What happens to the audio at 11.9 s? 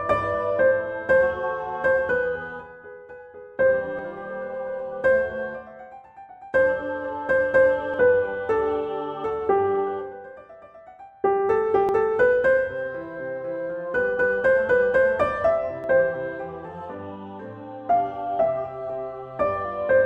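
At 11.89 s there is a skip: audio missing between chunks, with roughly a twentieth of a second dropped and the two sides butted together with no silence. The likely cause is a recorder handing over between 4-second chunks. A waveform shows an abrupt step at the join, and a spectrogram shows a sudden vertical seam.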